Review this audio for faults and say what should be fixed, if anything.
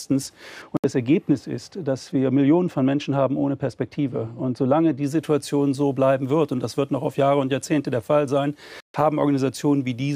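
From 0.62 to 5.03 s, de-emphasis was applied wrongly: a treble cut meant to undo pre-emphasis hit audio without any, or was applied twice, leaving it dull and about 13 dB down at 10 kHz against 1 kHz. A smooth downward slope, rather than a sharp cutoff, separates it from low-pass filtering. Apply de-emphasis only when the source is known to carry pre-emphasis, and only once.

Silent holes at 0.77 to 0.86 s and 8.80 to 8.95 s are likely Bluetooth dropouts, with packets arriving too late and being discarded. The sound resumes further along rather than where it stopped, so it is not a pause. Keep the link strong and uncongested, or use a larger receive buffer.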